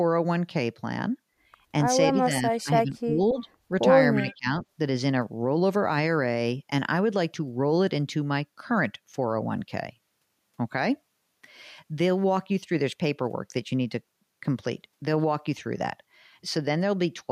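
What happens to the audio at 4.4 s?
Speech suppressed in double talk runs from 4.16 to 4.48 s, so at 4.4 s the speech is still pushed down. Its level falls by roughly 25 dB at its deepest and the sound thins and breaks up for about 0.3 s in all. The likely cause is an echo canceller facing both sides speaking at once. Unable to tell its own talker from the loudspeaker return, it attenuated everything it heard.

An echo leak overlaps this stretch, from 4.14 to 4.35 s. A faint delayed copy of the speech trails the original by about 0.3 s, sitting roughly 25 dB below it. This most likely comes from a loudspeaker-side echo canceller letting part of its microphone pickup through, so that the residue was sent back down the line.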